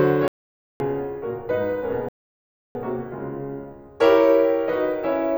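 At 0.28 s the music cuts abruptly to dead silence until 0.80 s, an audio dropout to silence lasting about 0.52 s. It likely comes from the input link failing while silence kept being written. The waveform flattens out and the spectrogram shows an empty black gap, with no room tone left.

From 2.09 to 2.75 s the sound halts mid-phrase for about 0.67 s, a playback stall, likely because the player was starved of data or blocked, and then resumes. On the waveform this appears as a flat gap with hard edges, and the spectrogram shows a clean vertical band of silence.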